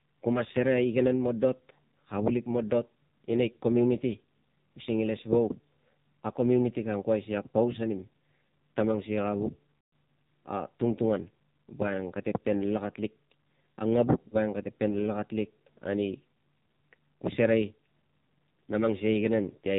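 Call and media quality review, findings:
AMR narrowband mobile codec, whole call. Speech band-limited below 4 kHz, heavily buzzy and synthetic; consistent with a low AMR-NB mode near 5.9 kbps. Mechanism: vocal-tract model excited by sparse pulses per 5 ms subframe, too few bits to track the voice.

Lost AMR speech frames, 9.76 to 9.92 s. 160 ms dropout, fitting a run of eight 20 ms frames; voice smears, stretches, then fades out before recovering weak. Decoder repeating last good pitch and vocal-tract parameters with decaying gain. Radio bit errors failing frame checksums.

Lost AMR speech frames, 14.28 to 14.36 s. Brief 40 ms dip or warble, matching two frames. Same concealment: parameters repeated at reduced gain, shorter so no full fade.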